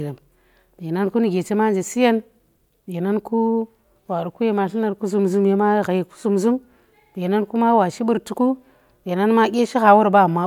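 Nothing in this speech recording stands out as a technical fault; it just rolls along from the first moment to the last without a hitch worth pointing to.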